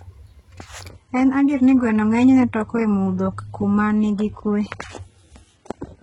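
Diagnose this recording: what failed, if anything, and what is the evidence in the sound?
The stream dropped to a lower bitrate at the network stage, with the codec carrying the audible damage. From 0.90 s to the end, the treble changes abruptly to a thinner, partly synthetic top with nothing above 11 kHz, and codec artefacts increase. There is no gap at the change. That pattern fits an adaptive player switching to a lower-bitrate rendition under reduced bandwidth, such as a move from AAC-LC near 96 kbit/s to HE-AAC near 12 kbit/s.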